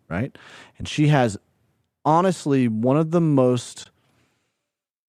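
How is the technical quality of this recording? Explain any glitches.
The recording has two brief dropouts in the speech, both from AAC frame loss with muting. The light coding texture throughout points to low-delay AAC compression, likely AAC-ELD, which adds only light damage of its own here.

At about 0.82 s, just before "she has", the sound briefly drops out, for roughly 10 ms, consistent with one lost frame. At 3.84–3.86 s a second gap of about 20 ms fits two consecutive lost frames. In each case the decoder zeroed the spectrum of the missing frames, and the overlapping transform windows faded the signal out and back in around them. The first is a brief dip and the second a soft-edged hole in the speech.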